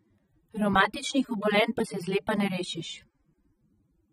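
Throughout, the speech sounds dull and warbly, with nothing above 15.5 kHz. This is likely AAC compression at a low bitrate near 24 kbps. Unlike a plain low-pass filter, it leaves fizzy, smeared sibilants.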